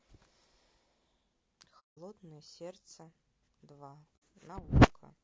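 Throughout, the speech has likely been coded with low-delay AAC compression (AAC-ELD), and the plainly rough, grainy sound with noise between harmonics fits a bitrate around 32 kbps. AAC frame loss with muting occurs from 1.79 to 1.98 s and again from 4.17 to 4.22 s. The decoder zeroed the missing frames, so the speech fades into soft-edged silent holes, consistent with about six and then two lost frames.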